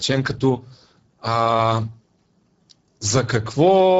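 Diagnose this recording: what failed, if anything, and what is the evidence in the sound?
The failure is at the codec stage: Speex codec damage runs through the whole clip and is plainly audible. The speech has a rough, hoarse, noisy quality, which points to a low bitrate, near 10 kbps. The CELP coder has too few bits to model the excitation, so the voicing breaks up into grainy noise. Nothing is present above about 7.6 kHz. Unlike a simple low-pass filter or bandwidth limit, the damage is in the texture of the voice itself, not just a loss of treble.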